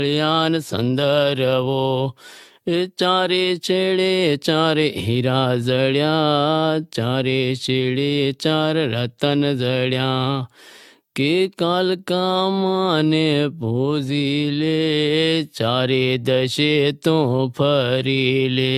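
Throughout, the speech sounds swirly, hollow and smeared with blurred attacks, likely generation loss from about ten AAC re-encodes. The spectrogram shows speckled holes and nothing above 17 kHz.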